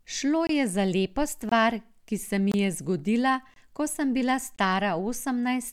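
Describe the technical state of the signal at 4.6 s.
At 4.56 to 4.59 s the speech drops into a brief hole of about 23 ms, a gap between chunks. The audio arrives in blocks of 1.0 s, and silence is inserted at the join instead of the next block following seamlessly.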